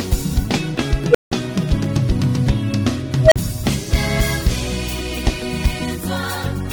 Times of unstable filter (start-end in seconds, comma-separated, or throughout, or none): 1.10-1.32, 3.23-3.36